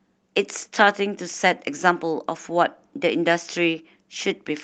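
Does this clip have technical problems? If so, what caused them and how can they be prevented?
No, nothing in this speech stood out as a technical problem on listening, so there is nothing here that needs preventing.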